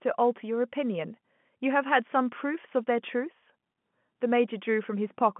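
Nothing goes wrong anywhere in this recording; it's just ordinary G.711 telephone coding, with the sound sitting in the usual phone band of 150 Hz to 3.4 kHz and nothing at all above 3.8 kHz.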